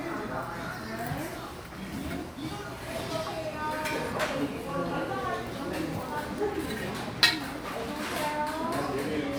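No technical faults can be heard anywhere in this recording of sounds. Every moment of it comes across as intended, with nothing breaking up the audio.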